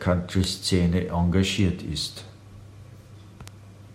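Three bit error spikes tick through this speech at 0.44 s, 1.59 s and 3.48 s, about -10, -22 and -16 dBFS. Each is a flipped bit jolting a sample or three, then snapping back.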